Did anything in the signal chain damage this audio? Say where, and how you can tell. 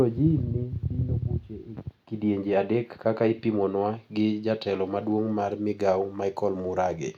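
No, nothing damaged this audio.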